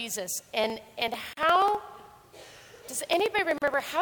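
From 0.64 s to 3.93 s, small regular ticks recur every 63 ms, about fifty in all. These are periodic USB or driver dropouts: a blocking task skips roughly a millisecond of audio each time. At 1.33 s and again at 3.58 s, the sound breaks off into brief silences of about 40 ms and 38 ms, then resumes where it stopped. Each is a gap at a join of encoded pieces, where encoder delay and end padding were left untrimmed.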